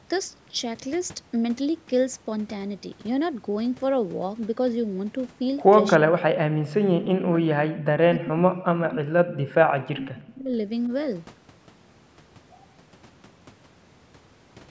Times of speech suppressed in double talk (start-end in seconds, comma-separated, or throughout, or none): 5.98-6.28, 6.72-10.56